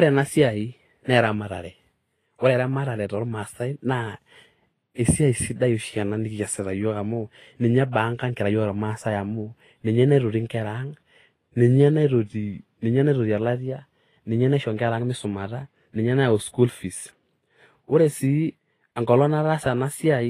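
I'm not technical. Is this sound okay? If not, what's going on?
No. Throughout the speech there is plainly audible compression damage, most likely from Vorbis compression squeezing the file hard. The highest treble is cut off above 14.2 kHz, and the remaining fine detail is replaced by grainy hiss, so the sound comes out rough.

There is also pre-echo from 4.94 s to 4.99 s, just before "esiai sidai". The compression spreads its noise across a short stretch, so a short hiss lasting about 44 ms arrives before the sharp start of that sound and softens its attack.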